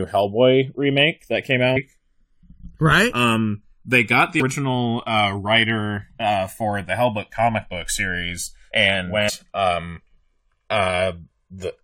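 Channels drifting apart runs through the whole clip. The two channels were captured on separate clocks that differ by roughly 100 parts per million, so the delay between them creeps up to around 2 ms by the end. Summed to mono, comb notches sweep slowly through the spectrum, heard as a slow flanging.

Damaged data in a compressed stream appears at 1.75 s after "remake that came", at 4.40 s after "they got the", and from 9.28 to 9.30 s after "comic book series and". At each spot, corrupted frames knock the decoder out of sync while it searches for the next frame header, producing a brief chirp or blip.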